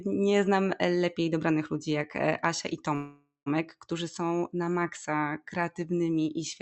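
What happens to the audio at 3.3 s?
At 3.3 s the speech stalls in a call audio freeze from 2.95 to 3.48 s, likely because delayed packets emptied the jitter buffer. The last sound is stretched into a fading buzz or hiss that ends in about 110 ms of silence. Unlike a loss dropout, nothing is removed: "którzy są na maksa" resumes intact, half a second late.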